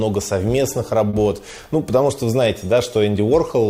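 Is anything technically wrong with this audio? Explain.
Yes. From 1.09 to 1.23 s there is a short stall from a late packet. A packet arrived late, the jitter buffer ran dry, and the receiver stretched the last sound for about 40 ms, then resumed exactly where it left off, losing nothing. It is heard as a held moment with a slight buzz or dip. A spectrogram shows flat, repeated frequency bands, and the waveform shows a run of repeated cycles there.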